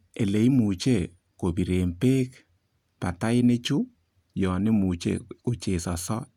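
No technical faults can be heard anywhere in the recording: the signal holds steady in level and timing, with no interruptions or damage to the audio path.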